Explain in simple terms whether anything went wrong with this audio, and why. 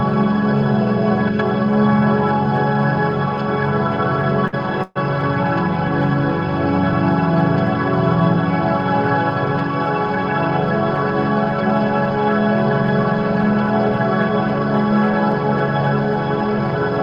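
Two hiccups land close together here. At 4.47 s there's a short stall from a late packet: one chunk of audio showed up late, so the player stretched the last bit of sound for about 53 ms until it arrived, then picked up exactly where it left off.

Just after, from 4.83 to 4.97 s, there's a call audio freeze. The sound hangs and fades for about 128 ms, ending in a brief silence of about 20 ms. It's likely caused by packets getting held up on the way, but nothing's actually lost.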